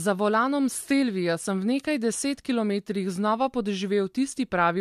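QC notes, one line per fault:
No faults were found in this speech clip. Nothing needs logging at any point.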